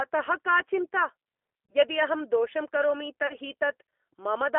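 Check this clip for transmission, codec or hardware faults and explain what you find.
Two kinds of fault are present: G.729 coding across the whole speech clip, and two short dropouts patched by VoIP packet loss concealment.

The G.729 codec damage is plainly audible throughout. The speech sounds rough and slightly synthetic, as the decoder rebuilds it from a vocal tract filter, a pitch predictor and a few pulses per subframe, consistent with an 8 kbit/s codec. The line band runs from 300 Hz to 3.4 kHz, so a spectrogram shows an empty region above 3.4 kHz and thinned low bass, with smeared, grainy harmonics.

VoIP packet loss concealed by the speech codec occurs at 1.66–1.75 s and again at 3.27–3.35 s. Each gap is consistent with a single lost 30 ms packet. The decoder extended its last pitch and filter at falling gain, so each gap is heard as a brief stretched sound, a buzzy tone or coloured noise that fades. 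Because each frame builds on the previous one, the distortion persists past 30 ms, to roughly 90 ms. On a spectrogram, unnaturally steady harmonics fade out. The waveform shows a decaying periodic stretch before the speech recovers.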